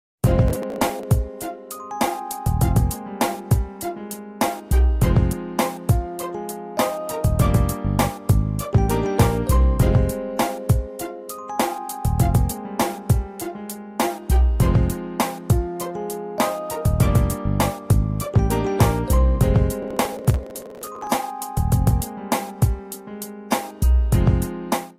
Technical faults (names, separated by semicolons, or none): processor overload crackle